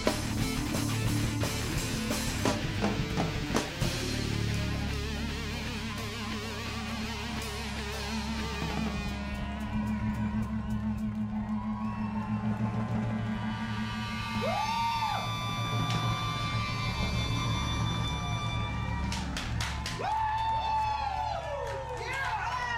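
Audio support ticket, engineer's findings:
No audible faults found on listening; no component implicated, no action required.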